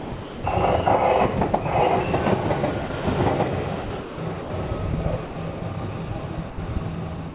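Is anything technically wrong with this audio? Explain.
Yes. Two kinds of voice-detector fault are audible.

Sound chopped by the voice detector occurs at 0.0–0.44 s, 3.84–4.5 s, 5.26–5.62 s and 7.16 s to the end. The likely cause is the sender's detector toggling transmission within each stretch, so portions from about 90 to 340 ms are swapped for comfort noise. The sound turns choppy.

Sound dropped by the voice detector occurs at 2.88 s, a 20 ms loss, and at 6.5–6.58 s, an 80 ms loss. Here the sender likely judged quiet material as background and stopped transmitting, and the receiver filled the gap with steady comfort noise before the sound resumed. Throughout, nothing is heard above 4 kHz, consistent with a narrowband call codec.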